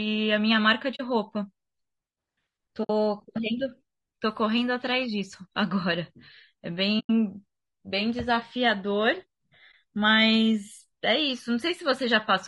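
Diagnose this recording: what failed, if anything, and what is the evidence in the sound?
The speech is rough and grainy throughout, with noise filling the spaces between pitch harmonics and a thin, somewhat synthetic top band. This points to the codec stage, likely low-delay AAC compression such as AAC-ELD at a rate around 32 kbps. At this low rate bits run short, so quantization noise is left between the harmonics. Unlike the watery swirl of conventional low-bitrate codecs, the damage here is a steady graininess around the voice.

AAC frame loss with muting appears as four brief holes, at 0.95 to 1.01 s, 2.83 to 2.90 s, 6.99 to 7.10 s, and 9.71 to 9.74 s. The gaps run from about 20 ms to 100 ms, which fits whole frames of about 20 ms being discarded. The decoder zeroed those frames, and the overlapping windows fade the sound out and back in. Unlike a buffer dropout, the holes have soft edges, and nothing is repeated to fill them.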